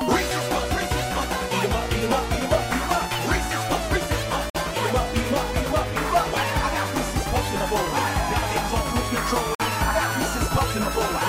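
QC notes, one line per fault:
4.50–4.55 s and 9.55–9.60 s: gap between chunks. The sound stops dead for 50 ms each time, then resumes with nothing missing. They recur about every 5 s, matching a delivery in 5-second chunks. Silence was inserted at each join, likely through codec padding or playback starting each chunk late. The result is a regular, clipped hiccup.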